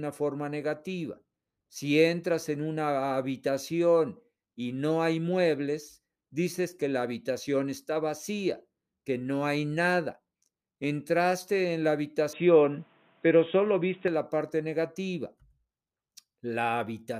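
Speech, with the input likely switched to a poorer device from 12.33 to 14.08 s, after "en la": the sound narrows abruptly to nothing above 3.8 kHz, shifts in level, gains faint new background noise, and returns to normal before "la parte negativa".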